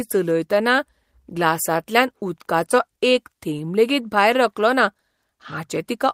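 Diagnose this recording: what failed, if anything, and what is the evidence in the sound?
Nothing failed here; every stage of the chain seems to have done its job on this speech, and there's no audible trace of trouble to diagnose.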